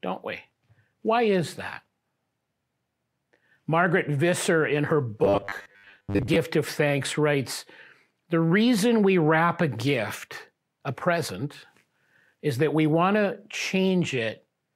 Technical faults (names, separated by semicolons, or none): robotic sound from repeated short buffers